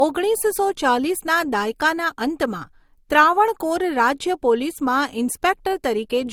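Throughout the speech, the audio was likely passed through two lossy codecs in turn, with the pairing pointing to MP3 at around 64 kbit/s followed by Opus at about 48 kbit/s. The second encoder spends bits re-coding the first one's artefacts, so both sets of artefacts are heard layered together, and nothing remains above 20.2 kHz.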